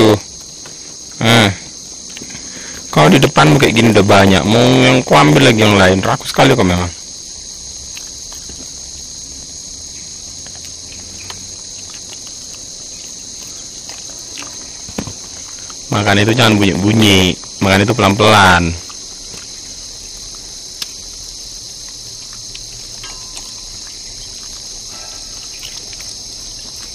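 Right from the start there's a steady buzz at about 86 Hz, a block size mismatch (padded). Each 512-sample read gets zero-filled gaps, so everything runs at 0.938 speed with pitch intact. Hard clipping hits at 0.0–0.14 s, 2.97–6.83 s and 15.94–18.65 s, overdriven by about 10, 16 and 15 dB, so peaks flatten into harsh fuzz.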